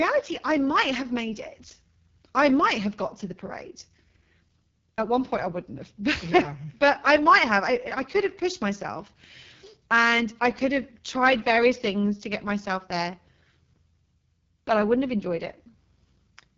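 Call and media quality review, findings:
AMR wideband (HD Voice) codec, whole clip: rough, raspy speech. Points to AMR-WB's lowest mode, around 6.6 kbit/s, too few bits for the vocal tract coding. Band above 6.4 kHz is shaped noise; nothing above 7.3 kHz.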